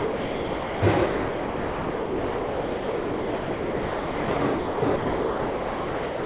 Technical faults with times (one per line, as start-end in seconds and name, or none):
0.00-6.25 sound dropped by the voice detector